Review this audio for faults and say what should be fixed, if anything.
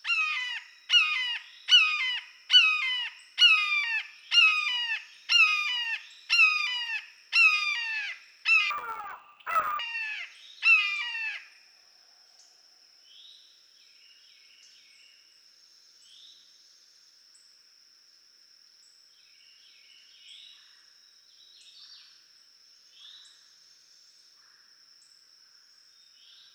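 From 8.71 to 9.80 s, interleaved audio is read as planar: each 10.9 ms block splits into half-speed halves, giving a dull, robotic buzz visible as 92 Hz striping. Prevent it by matching the reader's channel-layout flag to the buffer's actual interleaved format.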